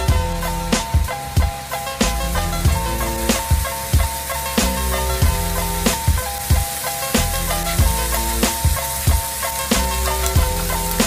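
No technical faults are audible.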